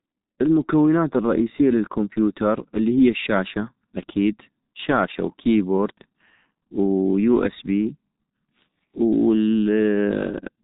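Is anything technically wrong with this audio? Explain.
Yes. Throughout the speech, the sound is muffled and hoarse, with smeared consonants and nothing above 3.8 kHz. This is heavy G.723.1 codec damage: 30 ms frames and a slowly updated voice model, at a rate that points to roughly 6 kbit/s.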